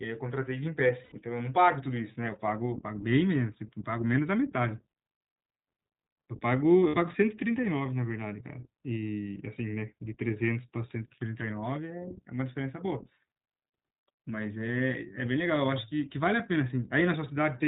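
Speech coded throughout with the iLBC codec: the band stops at 4 kHz, and each frame's excitation is coded independently, so the voice comes through clear but with a plainly audible rough, synthetic edge. The character fits 20 ms frames at around 15.2 kbps. There are lost iLBC frames at 1.04–1.13 s (about 80 ms) and 6.88–6.97 s (about 60 ms). The decoder fills each gap by repeating the last pitch cycle mixed with noise, heard as a brief held, buzzy vowel. Because frames stand alone, it recovers immediately afterward.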